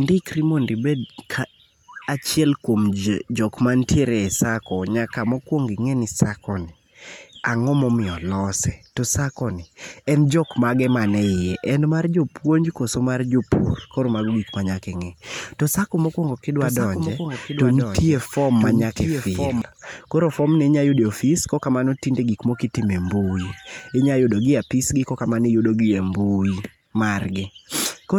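Speech clip where, from 16.60 to 19.62 s, a second copy of the audio runs about a second behind, a few decibels quieter, with no decay or room colour, starting and stopping abruptly: a doubled audio track, likely from a slower second capture path or an edit holding two copies.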